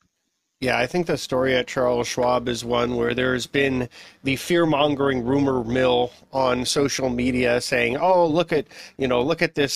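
Speech carries overlap-add ripple from start to finish. The level pulses by about 6 dB at around 150 Hz, giving a metallic buzz with extra tones around the voice. Windowed frames were rejoined with an overlap that does not sum evenly, so gain dips once per frame.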